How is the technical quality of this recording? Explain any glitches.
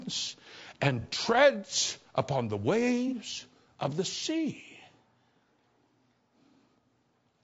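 The technical quality is compromised, with clear damage throughout and two brief glitches.

The speech sounds rough and grainy across the whole clip, with noise between the harmonics and a thin, synthetic top band. The likely cause is low-delay AAC compression at a low bitrate, around 32 kbps. Its short frames resolve pitch poorly.

Two short smeared, noisy patches occur, at 1.01 to 1.06 s, just before "treads upon the", and at 3.08 to 3.13 s, just after "treads upon the". These come from AAC frame loss with concealment. Each gap points to a single lost frame of about 30 ms. The decoder rebuilt it from the last good spectrum.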